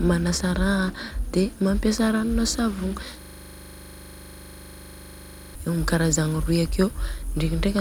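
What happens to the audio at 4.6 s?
A system hang loop from 3.21 to 5.55 s repeats one 40 ms piece, giving a 25 Hz buzz, seen as identical waveform blocks and spectrogram stripes.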